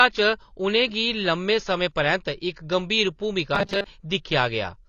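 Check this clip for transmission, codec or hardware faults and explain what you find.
Two faults stand out in this speech clip: one runs throughout, and one is a short burst near the end.

Throughout, there's AAC compression damage, plainly audible. The top of the spectrum is cut off, so the speech sounds dull, and sibilants smear and fizz. That's likely low-bitrate AAC-LC, around 24 kbps: with so few bits, the encoder drops the top band and quantises what's left coarsely.

From 3.55 to 3.86 s, the speech turns into robotic sound from repeated short buffers, a stiff metallic buzz pinned at 200 Hz. The likely cause is late-arriving audio being covered by looping the last 5 ms buffer, so most of that stretch is repeats rather than real signal.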